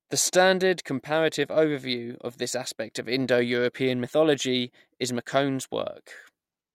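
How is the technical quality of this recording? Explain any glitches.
I hear no technical faults anywhere in this recording.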